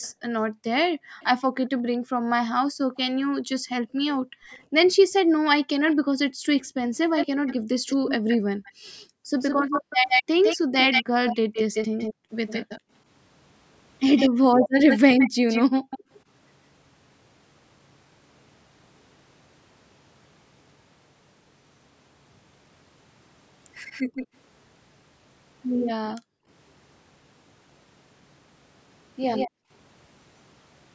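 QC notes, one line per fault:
0.01–16.2 s, 23.91–24.27 s, 25.84–26.15 s, 29.35–29.5 s, echo leak: a second copy of the speech trails 157 ms behind, roughly 5 to 15 dB quieter. It is a distinct repeat rather than a diffuse room tail, likely loudspeaker sound the far-end echo canceller let through.
0.21–12.3 s, 14.59–16.1 s, 26.19–26.48 s, 29.5–29.7 s, background gated by the echo canceller: the room sound ducks by up to about 40 dB, for around four seconds in total in the first stretch and a few tenths of a second elsewhere. This is suppression while the loudspeaker was playing, and the room sound returns when the canceller lets go.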